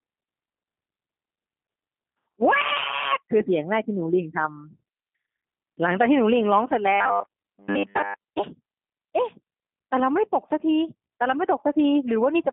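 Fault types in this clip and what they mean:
G.729 codec: speech rebuilt by a low-rate predictive coder from a vocal-tract filter, pitch predictor and sparse pulses, consistent with 8 kbit/s G.729A. The damage is plainly audible, a rough, synthetic texture in a 200 Hz to 3.6 kHz band, with nothing above 3.8 kHz.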